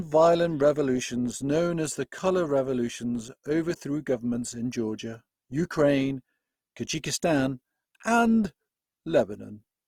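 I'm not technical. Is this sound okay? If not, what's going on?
No. Opus compression damage runs through the whole clip, start to finish: the speech sounds grainy, rough and hissy rather than clean. The likely cause is a file squeezed too small, so the encoder ran short of detail and filled the gaps with noise-like sound.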